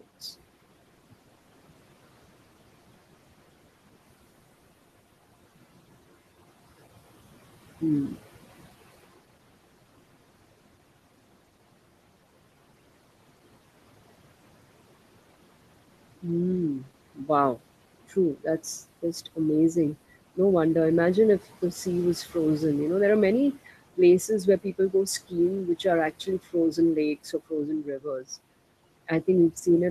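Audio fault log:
Throughout: noise suppressor artifacts. The room noise, sitting about 18 dB under the speech, gets pulled down by about 18 dB in the gaps, then swells back whenever speech comes in, so the background pumps.
16.79–17.62 s, 18.09–18.61 s, 23.53–24.94 s, 25.65–26.78 s, 27.24–28.26 s: speech cut by the noise suppressor. In each stretch the suppressor mistakes soft bits of speech for noise and ducks them, by up to about 19 dB at worst, over anywhere from a brief moment to roughly half a second, so endings and quiet consonants come out swallowed.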